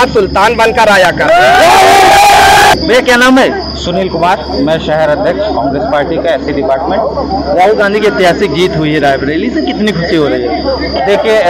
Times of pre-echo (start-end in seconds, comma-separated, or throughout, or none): none